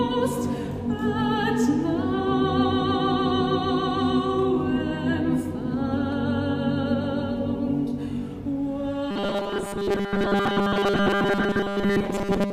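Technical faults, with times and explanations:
9.11 to 12.52 s, robotic sound from repeated short buffers: new audio likely arrived too seldom, so short chunks, which fits a 5 ms buffer, were replayed for most of the stretch, forcing a rigid metallic 200 Hz buzz.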